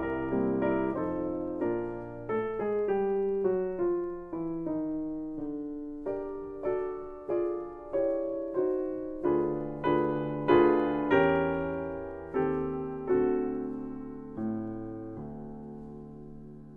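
From 0.1 to 16.74 s, clock slip clicks form a soft rattle about every 70 ms, likely from unsynced clocks roughly 400 ppm apart slipping single samples.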